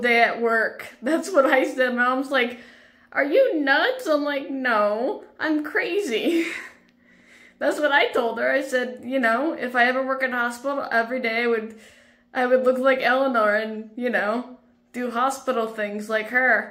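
Nothing here stands out as a technical problem; the audio holds together without any glitches or defects worth flagging.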